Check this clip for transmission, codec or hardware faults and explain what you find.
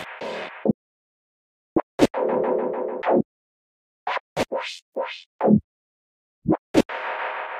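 One fault is present. An audio dropout to silence runs from 0.71 s to 1.76 s, losing about 1.05 s. The input was likely cut off while recording continued, so silence was written. The sound stops abruptly, leaving dead silence with no room tone, then resumes mid-flow, and whatever occurred in that second is gone.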